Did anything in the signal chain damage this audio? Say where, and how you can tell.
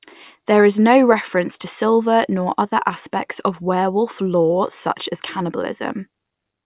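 No, no damage is audible.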